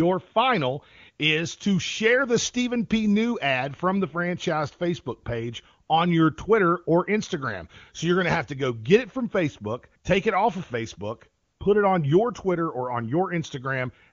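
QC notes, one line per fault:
5.87 s and 11.43–11.59 s: AMR comfort noise. The phone judged these moments silent and sent no speech frames. The receiver filled them with smooth, steady synthetic noise. A brief blip before "on your", then a 160 ms patch before "put it on your".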